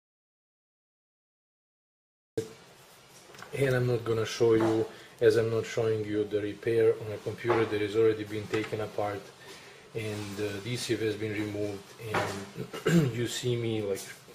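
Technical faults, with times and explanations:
0–2.38 s, audio dropout to silence already under way at the start: silence, no room tone, unlike a quiet pause; likely a lost input.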